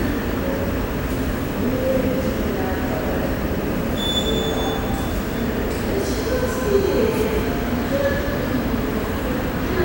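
A screen or video cable couples into the audio for the whole clip, causing video or display buzz: a 59.94 Hz field-rate buzz with hash, plus a 15.7 kHz line tone, roughly 15 dB below the sound.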